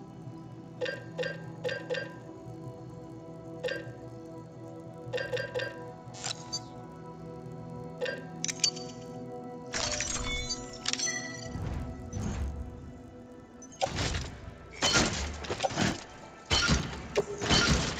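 A steady 50 Hz buzz rides under the sound throughout, present only while there is signal. This is a resampler restarted on every block: each 20 ms block, apparently converted from 16 kHz to 48 kHz, was processed alone, so every block edge carries a small error.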